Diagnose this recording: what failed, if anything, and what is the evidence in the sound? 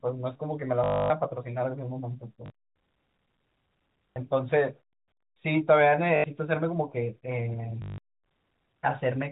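The network stage failed, causing packet loss with the last packet repeated. Short robotic stutters occur at 0.84–1.10 s (the longest), 2.46–2.50 s, 4.14–4.16 s, 6.16–6.24 s and 7.82–7.98 s. The receiver replayed the last packet until new audio arrived. The repeats ignore the pitch cycle, and longer runs buzz at 50 Hz, which fits 20 ms packets. A waveform shows one identical segment tiled end to end.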